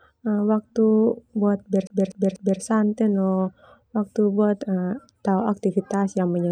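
From 1.87 to 2.61 s the speech gets stuck the way a skipping CD does: the same 0.24 s slice plays three times, with a brief mute at each jump. The laser is thrown back one track per disc turn, so the loop is short, fixed and evenly timed, unlike a random dropout or stutter.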